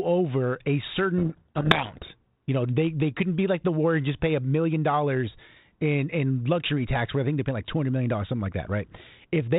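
A codec payload misread runs from 1.18 to 2.11 s, just after "over a": the speech is buried in harsh distortion because the receiver reads each G.726 code word with its bits in the wrong order. This speech clip's band-limited telephone sound fits 32 kbit/s G.726.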